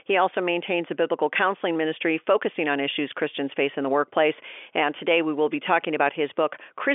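Nothing stood out on listening to this speech, which comes across with the narrow 300 to 3400 Hz band expected of a G.711 telephone line.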